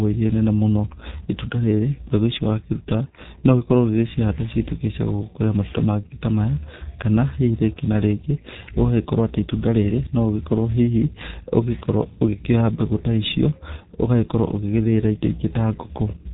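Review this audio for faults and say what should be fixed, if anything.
Muffled, hoarse speech with blurred consonants runs throughout, nothing above 3.8 kHz: G.723.1 codec damage, heavy, consistent with roughly 6 kbit/s and its slow 30 ms frame updates. Use a wideband codec at a higher bitrate on this path.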